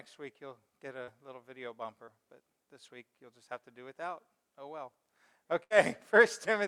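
At 1.03 to 1.09 s and again at 2.05 to 2.09 s there's short concealed packet loss: about 40 ms, then about 20 ms, never arrived in time. The receiver patched each hole by carrying the previous sound forward and blending back in, so you hear a brief smear or wobble.

Around 5.63 to 5.72 s a burst of packet loss hits. About 60 ms of audio is gone, and the decoder fills roughly 71 ms by stretching the last sound while fading it into a held buzz or hiss. Playback then jumps ahead, with that stretch simply missing.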